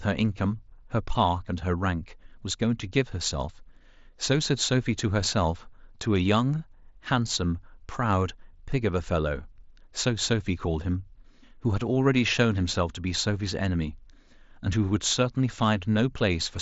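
No technical faults are present in this speech, which carries the band-limited character of a Bluetooth mSBC headset link, with nothing heard above about 7.7 kHz.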